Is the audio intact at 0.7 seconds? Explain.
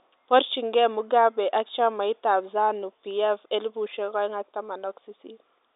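Yes, the audio is intact at 0.7 seconds, with only the narrow telephone band of G.711 coding, which passes nothing above about 3.8 kHz, shaping the sound there.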